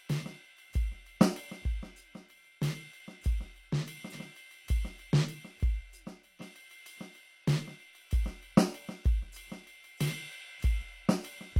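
At 4.09 to 4.14 s and 6.37 to 6.42 s, damaged data in a compressed stream makes the decoder misread frames and resync, giving brief glitches.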